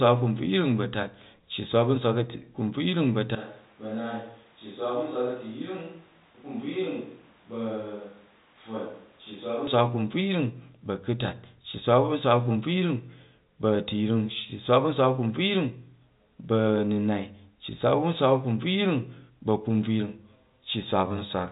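A speech recording whose pickup most likely dropped from the close microphone to a distant one between 3.35 and 9.67 s, in what amounts to a switch to a distant microphone. Over that stretch the voice turns abruptly roomy and hollow, thinner in the bass, about 10 dB quieter, with room noise rising to roughly 25 dB below the speech. The return at 9.67 s is just as sudden. Throughout, the G.711 telephone coding passes nothing above 3.8 kHz.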